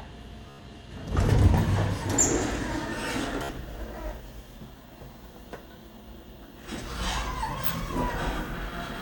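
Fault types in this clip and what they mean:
Bluetooth stutter: lost or late wireless packets make the receiver replay a short slice, heard as brief repeating buzzes around 0.50 s and 3.43 s, about 90 ms and 60 ms long.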